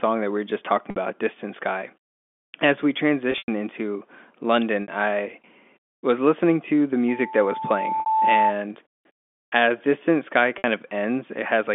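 At 0.90 s the speech drops out for 60 ms, which fits three lost 20 ms packets, and the receiver bridges the gap with packet loss concealment by pitch repetition, looping the last pitch period. It sounds like a briefly held, buzzy syllable. On a waveform that stretch shows identical repeating cycles, and a spectrogram shows frozen, perfectly flat harmonics.

At 3.32 s the loss is heavier. About 120 ms goes missing, scattered over 160 ms, and the longest run is 100 ms. The repeated period fades toward silence before the speech cross-fades back in, leaving a tapering envelope on the waveform. The same 60 ms hold recurs at 4.82 s.

From 7.08 to 8.55 s, loudspeaker feedback squeal sets in. The microphone picks up its own loudspeaker, and at 878 Hz the loop gain exceeds unity. A pure tone swells over roughly a second until it is about as loud as the speech. It appears as a single bright horizontal line within the telephone band, whose 250 to 3500 Hz limits show as a clean cutoff.

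A further 60 ms pitch-repetition patch at 8.00 s falls inside the squeal. The last one comes at 10.58 s.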